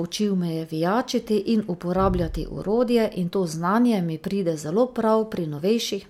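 No technical faults are audible.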